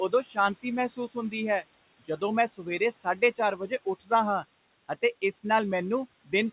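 Noise suppressor artifacts run through the whole clip. The suppressor pulls the steady room noise, about 18 dB below the speech, down by about 21 dB between phrases, then lets it rise under the speech. The speech sits inside a band that stops near 4 kHz, consistent with a G.711 call path.

Speech cut by the noise suppressor occurs from 0.09 to 0.38 s, 0.89 to 1.34 s, 2.0 to 2.22 s, 2.48 to 3.39 s and 3.57 to 4.11 s. The suppressor mistook quiet parts of the speech for noise and turned them down by up to about 16 to 19 dB, so soft sounds and word endings, about 100 to 300 milliseconds in each stretch, come out swallowed and faint.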